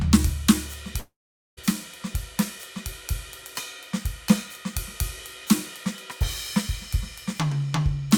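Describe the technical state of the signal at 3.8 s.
At 3.8 s the music plays through intact, with no technical fault present at that point.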